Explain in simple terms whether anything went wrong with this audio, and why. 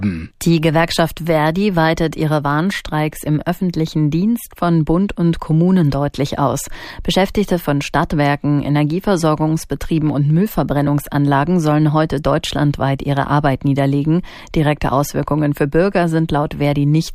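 Listening closely, nothing went wrong that I could hear; the audio sounded steady and natural throughout.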